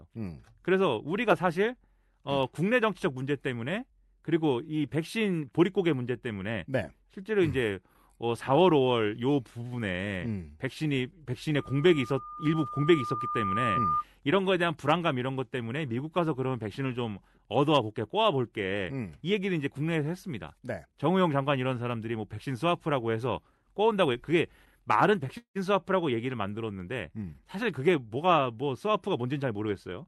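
Speech carried over a call link, with three faults. From 11.55 to 14.04 s a loudspeaker feedback squeal appears. A single 1.2 kHz tone swells over about two seconds until it is roughly as loud as the speech. The microphone is hearing its own loudspeaker, and at that frequency the loop gain has passed one. At 25.37 s the sound freezes for 0.2 s. It trails off as a fading buzz or hiss, with about 90 ms of silence inside it. Then it resumes where it stopped, so nothing is lost but 179 ms of delay is added. This is likely a call audio freeze, where late packets drained the jitter buffer. From 27.55 to 29.67 s a jitter buffer speed-up follows. The speech runs about 8% fast at unchanged pitch and sounds hurried. The receiver is trimming short pitch-period slices, around 0.2 s in total, to work off the extra buffered delay. Throughout, the call codec's band limit near 12 kHz cuts off the highest frequencies.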